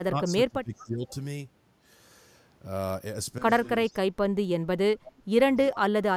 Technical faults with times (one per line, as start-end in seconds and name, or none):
0.00-1.09 speech suppressed in double talk
0.78-1.16 echo leak
3.87-3.97 echo leak
3.88-4.50 speech suppressed in double talk
4.94-5.38 speech suppressed in double talk
5.72-5.91 speech suppressed in double talk